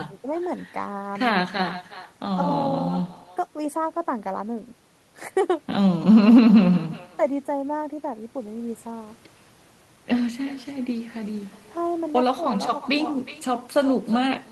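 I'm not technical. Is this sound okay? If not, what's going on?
No. Throughout the clip, every bit of speech is followed by a faint, hollow copy of itself, arriving a little under half a second later. This is echo with no canceller: the far end is playing the call through a loudspeaker, their microphone picks it up and sends it back across the network, and nothing on their side is removing that returning copy.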